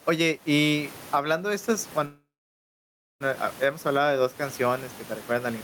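Gain pumping runs throughout: the background swells by something like 15 dB between phrases and ducks under each loud syllable, likely from excessive gain driving a fast limiter. The room noise, about 35 dB below the speech, is what rises in those gaps. A call audio freeze from 2.05 to 3.22 s, after "y hablando de estas", likely comes from delayed packets draining the jitter buffer. A brief fading buzz gives way to about 0.96 s of silence, then speech resumes with "a hemos", shifted about 1.15 s later with nothing lost.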